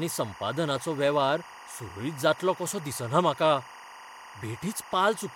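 Timecode bleed runs throughout the speech. Linear timecode from an adjacent track or cable has leaked in, its square wave flipping between tones near 1 and 2 kHz. It sits around 20 dB below the speech as a steady chirping warble, its rhythm fitting 23.976 frames per second.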